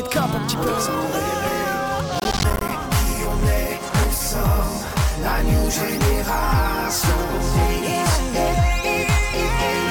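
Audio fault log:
2.15–2.71 s processor overload crackle: a gritty burst of crackle tears through the sound for about half a second. The processor kept missing its buffer deadlines, and each miss left a hard-edged gap of silence. The spacing fits roughly 10 ms buffers, with some twenty dropped.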